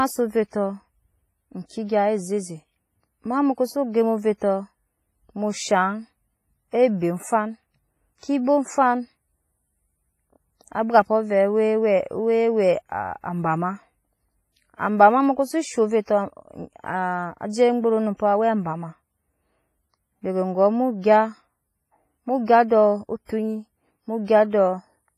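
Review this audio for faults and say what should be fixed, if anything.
WMA compression is the likely cause of the ringing, washy quality that runs through the whole speech clip. The transform encoder is starved of bits, which fits a low bitrate of around 24 kbps, so weak spectral lines are zeroed and hiss swells and fades with the signal. Nothing sounds above 15.4 kHz. To prevent this, encode at a higher bitrate or use a modern codec such as Opus or AAC.

Pre-echo comes from the same long transform blocks. Sharp attacks fall late in a block, and the quantisation noise sized for the loud onset leaks into the silence before it. This puts a brief hiss ahead of attacks at 8.20 to 8.23 s (about 32 ms), 23.26 to 23.29 s (about 37 ms) and 24.25 to 24.28 s (about 27 ms), leaving those onsets soft. To prevent this, use an encoder with block switching or a higher bitrate so transients get short blocks.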